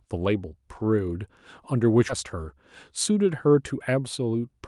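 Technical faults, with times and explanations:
2.1 s, skip ahead: roughly 0.7 s of queued audio was dropped to catch up after a backlog, so playback jumps straight forward with no gap or fill, and the speech on either side of the cut is butted together abruptly.
3.10 to 3.55 s, jitter buffer speed-up: the buffer was holding more than its target, so the receiver trimmed short pitch-period pieces repeatedly, removing around 50 ms in total; speech runs about 8% faster at unchanged pitch and sounds briefly hurried.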